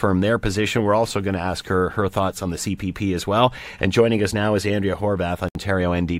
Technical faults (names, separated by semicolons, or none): gap at a join of encoded pieces